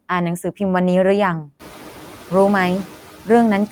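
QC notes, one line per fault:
Throughout: noise suppressor artifacts. The suppressor pulls steady-noise bands down by about 8 dB frame by frame. After the room noise rises around 1.5 s, the residue sinks in the pauses and swells under speech, leaving a mottled, flickering noise floor on the spectrogram between harmonics.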